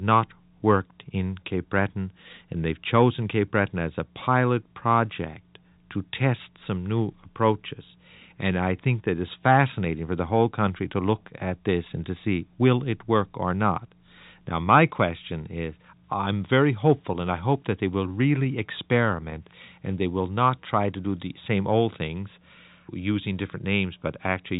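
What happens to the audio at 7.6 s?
Nothing goes wrong at 7.6 s; the speech carries on intact through that moment, with only the narrow, telephone-band quality of its G.711 coding.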